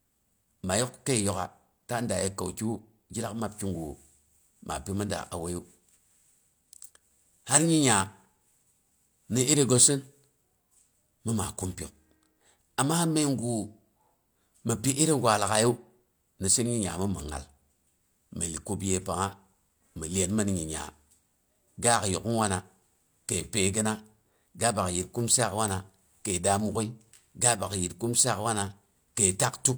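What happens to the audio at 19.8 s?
At 19.8 s the speech carries on intact, with no dropout, click, distortion or other fault audible at that moment.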